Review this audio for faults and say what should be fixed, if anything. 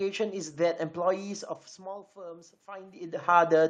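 From 1.77 s to the end, there's automatic gain rising. The input dropped by about 17 dB, so the AGC slowly cranks up, swelling speech and room noise together. The level shifts from the talker moving around 1.5 s and 2.5 s are natural. To fix it, set a fixed gain or slow the AGC's release so it doesn't chase dips.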